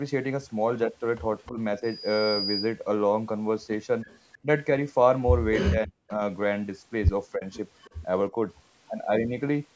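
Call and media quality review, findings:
Echo leak, likely the far-end echo canceller leaving part of its loudspeaker pickup in the return path. The residual comes back 310 ms late, roughly 30 dB under the talker: a faint delayed copy at 1.46–1.50 s, 4.08–4.19 s and 7.80–8.01 s.

Speech suppressed in double talk, likely the echo canceller turning the near talker down while both sides overlap. Brief dips of around 10–15 dB at 1.48–1.58 s, 4.43–4.47 s, 7.35–7.44 s and 8.30–8.36 s. Near-complete dropout, roughly 40 dB deep, at 5.70–6.21 s.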